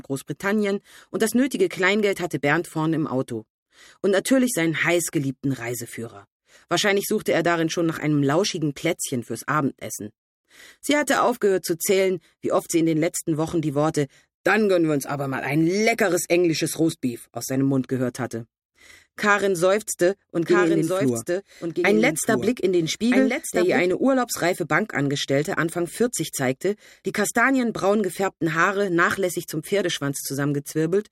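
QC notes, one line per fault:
20.46–23.92 s, doubled audio track: the signal was likely mixed in twice, through a slower second capture path or an edit holding two copies out of step. A full-band copy trails about 1.5 s behind, roughly 5 dB quieter, with no decay or room colour, and starts and stops abruptly.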